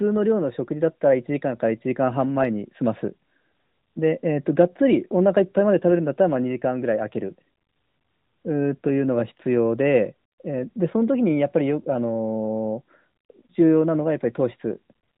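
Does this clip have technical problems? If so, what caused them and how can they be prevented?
No, this clip has no technical problems, so there is nothing to prevent.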